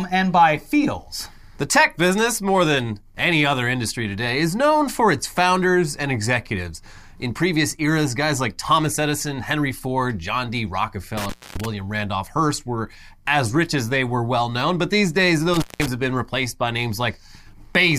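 At 11.17 s the speech drops out in an intermittent contact fault, a loose plug or cable briefly losing its connection. The line is open for about 262 ms, with crackle as it breaks and again as it reconnects, and faint hiss in between. It happens again from 15.54 to 15.88 s, right after "known but these days" and before "have been replaced by", this time a shorter gap of roughly 179 ms.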